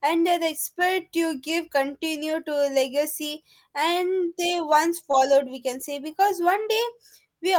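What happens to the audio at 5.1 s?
At about 5.11 to 5.15 s there is a short concealed packet loss. Around 20 ms of audio arrived too late for the decoder. The receiver bridged the first 14 ms by extending the preceding sound, then blended back. It heard as a brief smear or wobble.

At 5.13 s, a lost packet was rebuilt from error correction. The packet after it carried a low-bitrate copy, so the decoder played that copy instead of leaving a gap. This 20 ms stretch of speech sounds rougher and noisier than its surroundings.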